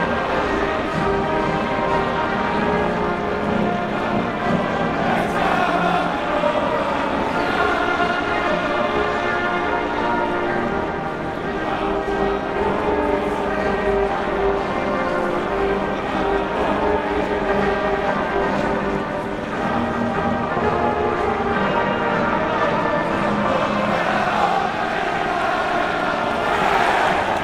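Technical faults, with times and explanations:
Throughout, overlap-add ripple. The sound was cut into windowed frames and rejoined with overlaps that don't sum to a steady gain. The level rises and falls once per frame, by about 11 dB, at around 300 Hz. That fast modulation sounds like a metallic buzz with extra tones around each note.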